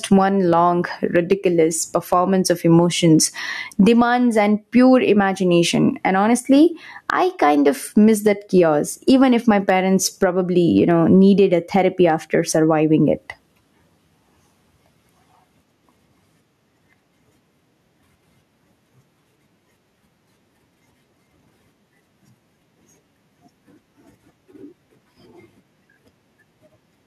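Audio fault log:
Throughout, gain pumping: the level of the speech swings by around 15 dB, with loud and soft parts squashed closer together, likely because the input gain is far too high and a fast limiter keeps clamping it down.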